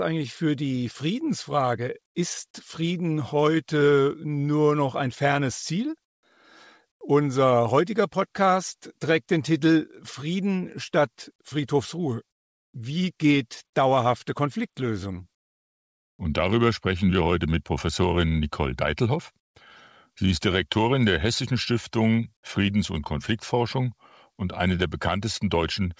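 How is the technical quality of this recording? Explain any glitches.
One glitch stands out, a short stretch of comfort noise in place of the background, heard over a call codec path that carries nothing above 8 kHz. From 6.05 to 6.23 s, the sender likely stopped transmitting during a pause, a form of discontinuous transmission, and the receiver filled the 180 ms gap with synthetic noise. The background, already about 56 dB below the loudest passages, drops by about 28 dB into a flat, featureless hiss before the real sound returns.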